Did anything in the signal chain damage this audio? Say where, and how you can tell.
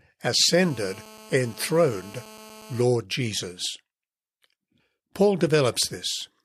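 Yes. From 0.52 to 2.83 s a GSM phone buzz, a hard, steady rasp at 217 Hz about 22 dB below the speech, enters the analogue wiring, where the circuit rectifies a nearby phone's call-mode radio bursts. A spectrogram shows evenly spaced horizontal harmonic lines, and the waveform shows a regular pulse train.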